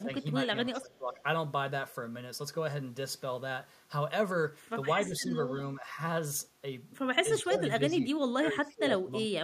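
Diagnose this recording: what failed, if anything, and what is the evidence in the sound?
Call processing failed. Speech dips at 0–0.25, 0.72–1.2, 5.08–5.34, 5.81–5.98 and 7.42–9.44 s, by up to about 25 dB. This is likely speech suppressed in double talk, with the echo canceller ducking the talker as echo.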